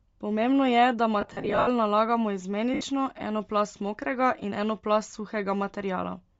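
Throughout the clip, the speech carries a breathy, grainy edge in its upper range, as if the top of the spectrum had been swapped for hiss. This is likely Bluetooth LC3 compression at a low bitrate. The encoder discards much of the high-frequency detail and the decoder fills those bands with noise. The damage is plainly audible and fits LC3 running at around 32 kbps with 10 ms frames.

From 1.21 to 1.68 s, just after "je da", lost LE Audio frames break up the speech. About 300 ms of audio goes missing, scattered across 460 ms, with the longest gap at roughly 70 ms. For each gap, the decoder repeats the last spectrum with randomised phase, so the speech briefly turns into a noisy smear before real audio returns.

A second loss at 2.74 to 2.81 s, just before "eno plast mokrega in", drops 70 ms. This produces the same short concealment smear.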